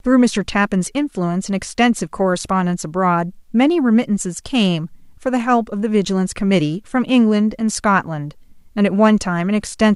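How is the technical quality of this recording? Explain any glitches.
The technical quality of the recording is sound, with no glitches to explain.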